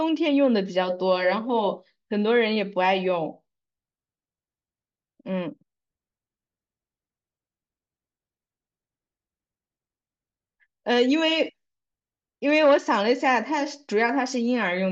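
A speech recording, and nothing is technically wrong with it.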